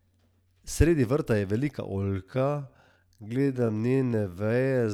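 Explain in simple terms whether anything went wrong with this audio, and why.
From 1.94 s to the end, the speech abruptly slows to roughly 0.59 times its normal pace, yet the pitch stays the same. That combination is the mark of a time-stretched section. The likely cause is software lengthening the audio by repeating tiny slices. Simply playing a recording too slowly would also drag the pitch down, and that doesn't happen here.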